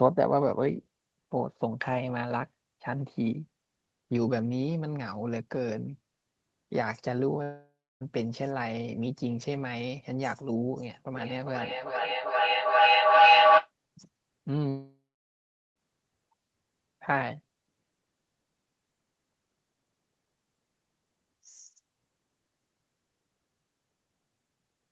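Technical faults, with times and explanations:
7.43–8.03 s and 14.69–15.78 s, long network dropout: the audio stops arriving, most likely due to a network outage. The last sound is stretched into a fading buzz, then silence: about 0.31 s of silence in the first gap and 0.79 s in the second. The sound resumes with roughly 0.58 s and 1.08 s of material missing. On a spectrogram, each gap shows a smeared, decaying band and then an empty column. On the waveform, the envelope tapers to a flat line.
11.15–13.72 s, feedback howl: two devices in one room are on the call, and the loop from microphone to loudspeaker gains level on each pass. It narrows to a tone around 700 Hz and peaks about 11 dB above the speech, with a loop delay of roughly 0.4 s. On a spectrogram, this appears as a bright horizontal line near 700 Hz that thickens over time. On the waveform, the envelope swells.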